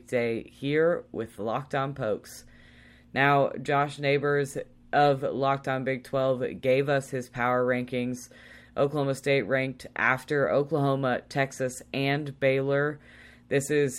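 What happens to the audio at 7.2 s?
Nothing goes wrong at 7.2 s; the speech there plays through intact, with no dropout, click or distortion.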